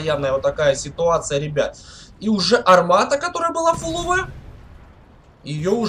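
No technical fault can be heard anywhere in the clip. Nothing in the audio marks a point where the signal chain went wrong.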